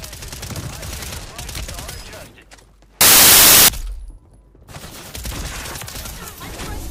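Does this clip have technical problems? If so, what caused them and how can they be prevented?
Yes. From 3.01 to 3.68 s the sound is replaced by loud, harsh broadband noise. These are samples built from the wrong bytes: the decoder misaligned or swapped bytes, so the noisy low bits became the largest part of each value. Prevent it by validating sample format, byte order and frame alignment before decoding.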